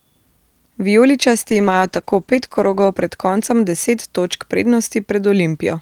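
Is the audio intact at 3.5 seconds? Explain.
No. At 3.5 seconds the speech sits inside a call bitrate drop that runs from about 1.48 to 4.61 s. A falling bandwidth estimate forced the Opus encoder from 48 down to 13 kbps, holding its lowest rate for about 1.3 s. The speech turns rough and muffled. On a spectrogram the upper band vanishes above a sharp ceiling and the remaining energy looks blotchy, while the waveform envelope stays intact.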